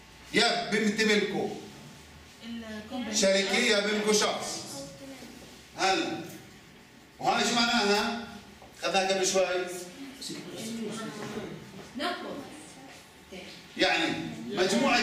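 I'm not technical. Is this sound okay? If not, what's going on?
Yes, nothing in this sound points to a technical problem.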